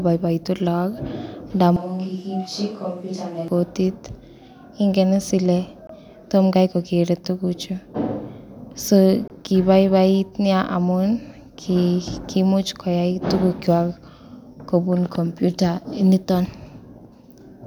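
A switch to a distant microphone runs from 1.76 to 3.48 s. The speech abruptly turns roomy and hollow, loses its low end, and drops by about 5 dB, while background noise rises to roughly 35 dB below the speech. The sudden change in both directions likely means the close microphone's signal was lost for that stretch and a farther pickup filled in, so the room's reflections and noise became part of the sound.

Bluetooth dropouts cut the speech at 5.87 to 5.89 s and again at 9.28 to 9.30 s. Each is a silent gap of 21.3 ms. The sound then resumes as if it had kept playing underneath, with nothing repeated or delayed. That behaviour points to audio data likely arriving too late over a wireless link and being discarded, and a gap of this length fits a single lost packet each time.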